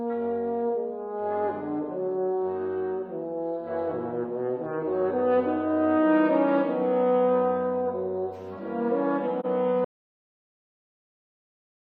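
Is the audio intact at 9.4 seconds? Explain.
No. AAC frame loss with muting from 9.39 to 9.46 s: the sound fades out and back in over about 43 ms, consistent with one lost frame zeroed by the decoder.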